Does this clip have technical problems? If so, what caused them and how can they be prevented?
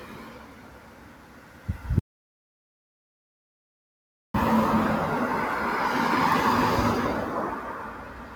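Yes. Throughout, the sound pumps and thins, with steady parts and tails swinging roughly 10 dB while attacks pass. This is a speech-made noise suppressor applied to music or sounds, treating sustained material as noise. Disable speech noise suppression when capturing non-speech sources.

From 0.00 to 1.68 s and again from 7.54 to 8.35 s, the sound is cut by the noise suppressor: sustained portions sink about 8 dB and decays are truncated. Bypass or retune the suppressor so steady content isn't classed as noise.

From 1.99 to 4.34 s there's an audio dropout to silence: 2.35 s of dead digital silence with no room tone, likely from a lost input connection or a stray mute. Secure cabling and monitor input levels during recording.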